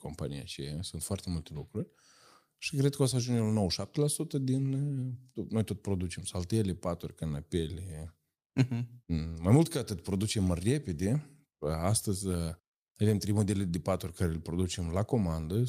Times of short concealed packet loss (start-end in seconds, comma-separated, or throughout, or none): none